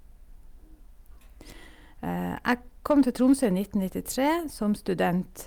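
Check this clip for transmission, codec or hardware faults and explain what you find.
Hard clipping occurs twice. From 2.91 to 3.45 s, the speech drives a stage about 3 dB beyond its limit, so peaks are sliced flat and gain crackly fuzz. A brief, milder overload of about 1 dB at 4.26 to 4.29 s adds a short crackle.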